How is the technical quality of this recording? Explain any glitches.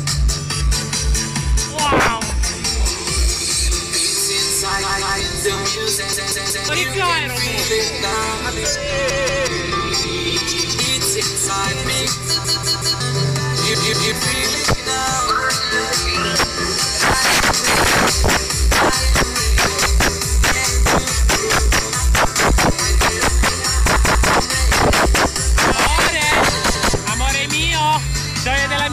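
Playback is disrupted by a repeated buffer fault, heard seven times: at 4.83, 6.13, 9.10, 12.45, 13.75, 23.96 and 26.75 s. Each time a chunk of about 186 ms, which fits an 8192-sample buffer, plays again because fresh audio was late, with a hard join at every repeat. It sounds like a stutter, looping twice at 4.83, 9.10, 13.75 and 23.96 s, three times at 6.13 and 12.45 s, and once at 26.75 s, each displacing roughly half a second or less of sound.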